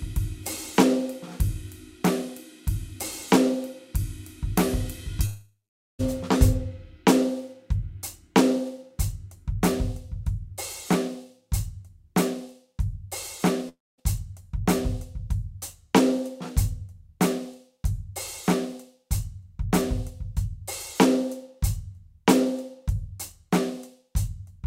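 Music, with two gaps where the sound smears into a fading buzz or hiss and then drops to silence: from 5.25 to 6.01 s, with about 0.46 s of silence, and from 13.69 to 14.00 s, with about 0.23 s. Both are likely a long network dropout. The receiver stretched the last sound before it decayed, and the music resumes further on with the missing stretch gone. The fading fill and skipped content rule out a brief packet-loss click or a deliberate pause.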